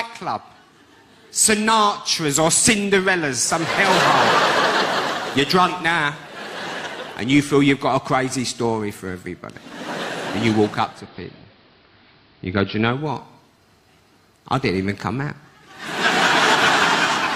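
At 10.84 s the sound dulls over about a quarter of a second, shifting level by about 2 dB and picking up a faint hiss some forty decibels down. It stays that way until 13.12 s, then returns to full clarity. This is digital radio blending to analogue: the receiver lost the digital stream and cross-faded in 243 ms to the same station's AM broadcast, then blended back once digital reception recovered.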